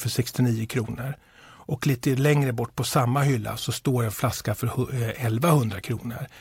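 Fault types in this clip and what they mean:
CD scratch ticks: from 4.34 to 5.03 s, six brief ticks, the longest a few milliseconds, interrupt the speech. A blemish on the disc corrupts more data than error correction can recover on each rotation, so the player patches or mutes those samples.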